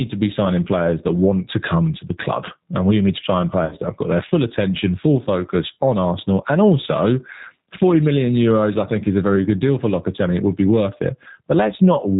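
Across the whole recording, the level swings by about 10 dB. Loud and quiet passages sit close together and sound squashed. This gain pumping is likely a fast limiter fighting an overdriven microphone.

The whole clip also carries G.729 codec damage, and it is plainly audible. Nothing above 4 kHz survives. The speech sounds slightly rough and synthetic, rebuilt from a coarse vocal-tract model. The damage fits the G.729A variant at 8 kbit/s.

From 3.65 to 3.78 s, just after "we need to sign", there is VoIP packet loss concealed by the speech codec. About 60 ms of audio is missing, which points to two lost packets. The decoder extends its last pitch and filter into a fading buzzy tone or coloured noise. The voice stays thin briefly before "that have got their".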